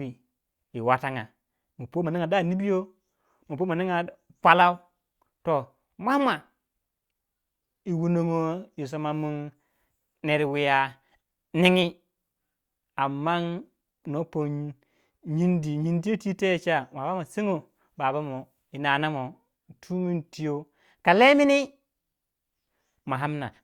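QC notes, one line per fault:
Nothing stood out on listening to this speech recording.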